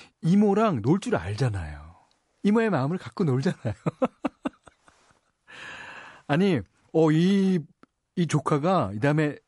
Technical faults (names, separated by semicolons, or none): MP3 compression